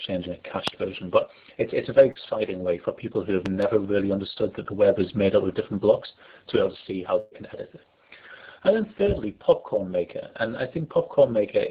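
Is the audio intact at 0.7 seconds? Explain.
No. A loud pop sits at 0.68 to 0.70 s: a single abrupt pulse, likely from a voltage step or glitch in the chain, jumps about 15 dB above the surrounding level. It is heard as one sharp pop layered over the sound, which carries on underneath.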